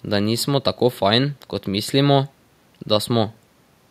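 No technical faults can be heard.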